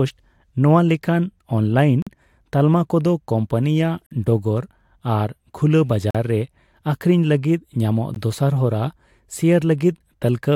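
Hard-edged dropouts of silence cut into the speech at 2.02 s, just before "ᱛᱟᱞᱢᱟ ᱠᱚᱫᱚ", then at 4.06 s, 6.11 s and 8.14 s. The first three each last about 44 ms and the last only 17 ms. These are gaps between stream segments: timestamps on roughly 2-second segments leave small holes, which the player fills with silence, so no audio is lost.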